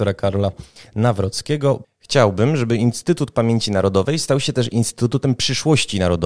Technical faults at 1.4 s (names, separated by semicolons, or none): none